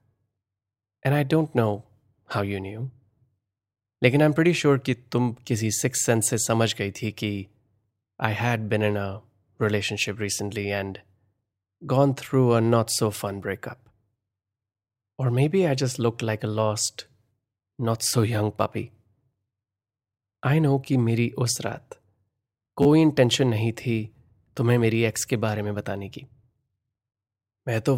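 At 22.83 to 22.86 s, just before "इंटेंशन नहीं", a repeated buffer: an 11.6 ms slice replays three extra times, consistent with a 512-sample buffer. It gives a brief buzz, not a gap, since no audio is skipped.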